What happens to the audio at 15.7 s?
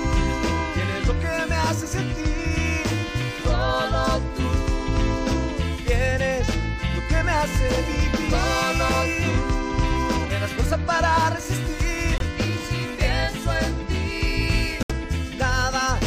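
Nothing goes wrong at 15.7 s; the audio plays through that moment intact, with no dropout, click, glitch or other fault to be heard.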